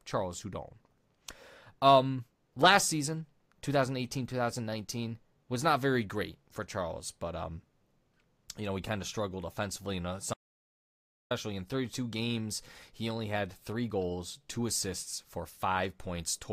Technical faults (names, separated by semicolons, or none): audio dropout to silence